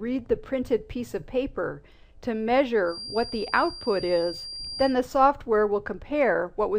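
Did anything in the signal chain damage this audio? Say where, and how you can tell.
Yes. From 2.83 s to 4.98 s there is a feedback whistle: a thin, steady tone at 4.8 kHz sitting roughly 15 dB below the main sound and swelling and fading slowly in level. The likely cause is the playback path, where sound from a loudspeaker was reaching the microphone with loop gain just at the edge of instability. A single frequency kept recirculating without building into a full howl, then stopped at 4.98 s.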